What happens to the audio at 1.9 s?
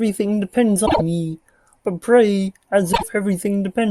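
Nothing goes wrong at 1.9 s; the speech runs through that point intact, with no dropout, click or distortion to be heard.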